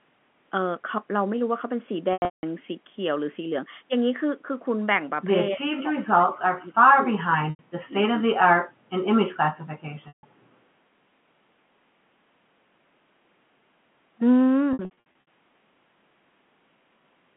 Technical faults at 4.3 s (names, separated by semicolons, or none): none